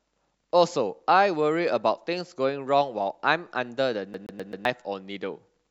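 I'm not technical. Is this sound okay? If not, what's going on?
No. From about 4.14 to 4.65 s the speech gets a CD stuck on one turn: the same tiny 0.13-second slice plays four times in a row, with a quick gap at each jump, like a scratched disc bouncing the laser back.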